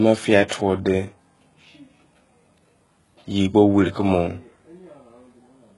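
Throughout the speech, treble is rebuilt rather than coded: s sounds turn gritty and metallic and nothing passes above 11.4 kHz, likely from heavy HE-AAC compression at a very low bitrate, around 12 kbps. From 0.48 to 0.51 s, pre-echo puts a 31 ms smear of hiss ahead of an attack, because block-spread quantisation noise fills the quiet before it.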